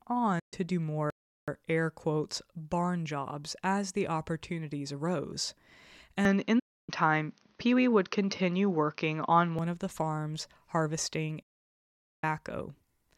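Right at 0.39 s the speech drops out for about 128 ms, back at 0.54 s. That's a digital broadcast dropout: the receiver lost good frames and muted, with a quick 8 ms fade rather than a hard cut, and the length fits four 32 ms frames going missing.

At 1.10 s the audio simply stops, sits silent for about 375 ms, then carries on at 1.48 s with "air quotes barn jobs". That sounds like a playback stall, most likely the player running dry of data or getting blocked before it caught up.

From 6.25 s to 9.59 s the sound goes dull, with a level shift of a few dB and a faint new noise floor well under the speech. There's no gap at the switch. The change comes just before "of the farms harvesting". The likely cause is the input switching to a poorer device for that stretch.

Inside that dull section, at 6.59 s, there's a second dropout lasting about 288 ms, back at 6.89 s. It has the same fast fade to silence, consistent with roughly nine frames lost.

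The third and longest dropout comes just after "of the farms harvesting", from 11.42 s to 12.24 s. That's 800 ms muted, which points to about 25 frames gone.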